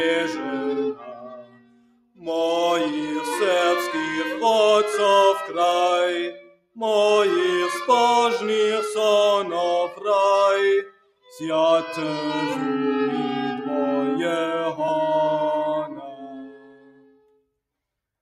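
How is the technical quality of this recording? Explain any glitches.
The recording is marred by processing. A noise suppressor meant for speech runs on material that is not speech, and it keeps cutting parts of the sound.

Throughout the clip, the noise suppressor is applied to music or sounds. It mistakes steady tones, ambience and decaying tails for background noise and pulls them down. Onsets pass, but sustained parts sink. Level swings by roughly 15 dB as the suppressor engages and releases. The result is pumping and a thin, unstable body to the sound.

In four places the sound is cut by the noise suppressor more heavily: 0.94 to 2.25 s, 6.33 to 6.77 s, 10.83 to 11.4 s, and 16.07 to 17.46 s. Each time the suppressor judges the held or fading material to be noise. Gain drops by up to about 19 dB. The sound dips sharply, and its decay is chopped short rather than fading naturally.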